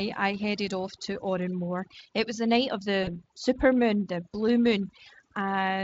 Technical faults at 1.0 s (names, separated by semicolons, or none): overdone noise removal